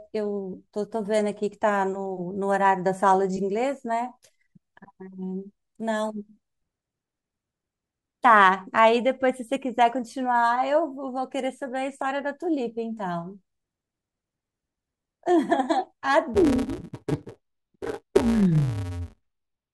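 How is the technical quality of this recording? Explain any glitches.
The speech holds up until the last few seconds, where one clear fault takes over. From 16.34 s to the end at 19.73 s you get interleaved audio read as planar. Each short block of alternating left-right samples gets split down the middle, first half treated as left, second half as right. The blocks are about 5.8 ms long, which fits a 256-sample block, so there's no real octave drop. Instead the speech turns dull and robotic, with a buzz at roughly 172 Hz, the block rate, riding on top.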